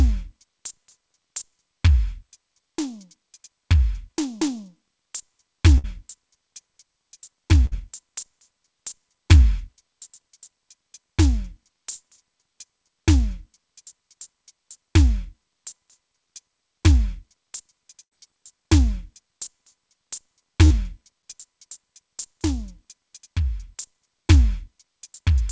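Bursts of packet loss hit at 5.78, 7.66, 18.03 and 20.65 s. Each time, the receiver stretches the last music and fades it. The music then resumes, with 60 to 80 ms missing.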